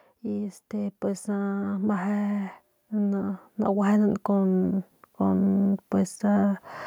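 Speech recording with an automatic gain rising fault running from 0.2 s to 5.68 s. Over those five and a half seconds the level climbs steadily by about 11 dB, and the background noise comes up in step with the voice, which marks it as a gain change rather than the talker getting louder. The automatic gain control judged the input too quiet and kept turning up its gain gradually across that stretch.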